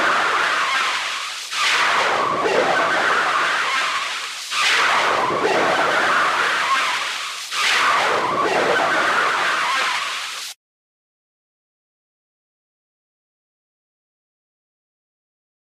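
Nothing goes wrong here at all; these sounds run their whole course without a single glitch or hiccup worth pointing out.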